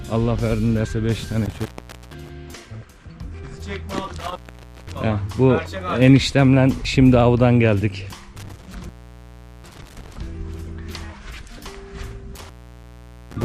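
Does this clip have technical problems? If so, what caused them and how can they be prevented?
Yes. Two kinds of fault are audible.

Overlap between stream segments causes tiny skips at 0.85 s and 6.85 s, about 6 s apart, which fits 6-second segments whose timestamps overlap. The player trims audio that wasn't really duplicated, so a sliver vanishes and the waveform jumps. The strict regular spacing and the absence of any gap tell it apart from a contact fault. Prevent it by making the packager write contiguous, non-overlapping segment timestamps.

Intermittent contact causes cutouts at 1.45–2.30 s (open for 468 ms), 4.19–5.04 s (518 ms), 8.37–10.17 s (749 ms) and 12.36 s to the end (837 ms). A loose plug or cable briefly breaks the signal path, which leaves crackle at each edge and faint hiss in between. Unlike the segment skips, these gaps last hundreds of milliseconds and come at irregular times. 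Prevent them by reseating or replacing worn cables and connectors and securing them with strain relief.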